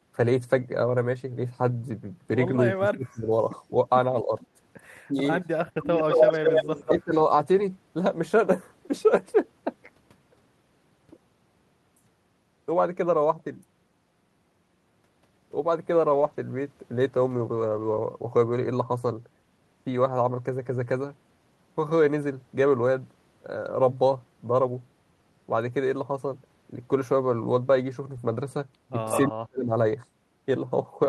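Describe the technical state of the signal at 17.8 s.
Lost packets rebuilt from error correction, 17.35 to 17.97 s: low-bitrate redundant copies fill the gap, so speech sounds rougher and noisier, with a grainier spectrogram texture but no silent hole in the waveform.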